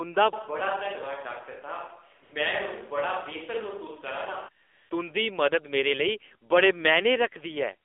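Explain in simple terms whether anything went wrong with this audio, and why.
Several things went wrong. Throughout, the speech has gone through the AMR narrowband mobile codec, the older phone-network speech coder. Everything above about 3.6 kHz is gone, and the low end below about 300 Hz is thin, so the voice sounds boxed-in like a phone call. The coder also rebuilds the voice from a simplified model, which makes it plainly buzzy and synthetic. A simple treble cut would only muffle the sound without adding that artificial edge.

From 0.33 s to 4.48 s the voice suddenly turns roomy and hollow. It also gets a little quieter, with less bass and more faint room noise behind it. At 4.48 s it snaps back to the closer sound. This is likely a switch to a distant microphone, such as a camera's. Reverb added in editing would not also lower the level and raise the background noise, and it would not start and stop this abruptly.

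Twice the phone system decided nobody was talking and filled the gap with AMR comfort noise. The first is a brief patch at 2.24 to 2.32 s. The second is longer, at 4.64 to 4.90 s. In both, the real background is replaced by a smooth, steady hiss that switches in and out. This differs from a dropout, which would leave true silence or a glitch rather than soft, even noise.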